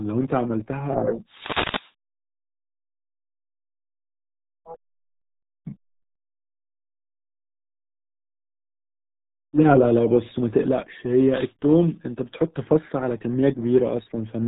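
From start to finish, the speech has passed through a low-rate RealAudio 14.4 codec, the kind built for dial-up modems. The heavy coding damage fits a budget of about 8 kbit/s. Everything above 3.8 kHz is gone, so the speech sounds muffled and boxed in, and the coarse modelling of the signal adds a gargly, watery texture to the syllables.

At 1.27 to 1.93 s, an analogue FM radio link drops into a fade, producing a wireless microphone noise hit. Reflections cancel the carrier at the receiver, and its noise rises into a burst of static. At 11.27 to 11.54 s, a second, shorter fade produces another quick hiss-like swish.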